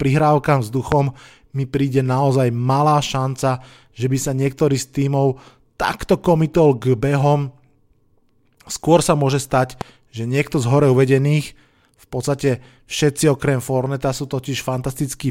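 At 0.92 to 0.94 s and again at 9.81 to 9.83 s, a single loud pop stands well above the speech, the first more strongly, likely from a brief voltage pulse such as a plug or switch transient. Unlike a dropout, the speech continues unbroken underneath.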